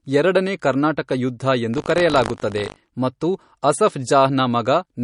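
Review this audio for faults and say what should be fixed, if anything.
The speech was likely encoded first as a low-bitrate MP3 and later re-saved at a high bitrate, so this is low-bitrate audio saved at a high bitrate. Nothing is present above 10.6 kHz, and the smeared, swirly coding artefacts fit an original around 40 kbit/s; the large second encoding restores none of it. To prevent this, keep and encode from the original lossless source rather than re-encoding an already compressed file.

From 1.72 to 2.90 s there is buffer tearing: the writing program and the playback hardware slipped so they cross inside each period. A small slice of every buffer, a few percent, replays audio from roughly 70 ms earlier with hard joins, giving a 50 Hz robotic buzz over the speech that fits a 20 ms period. To prevent this, give the audio thread enough headroom and buffer size that the writer always stays safely ahead of the hardware read position.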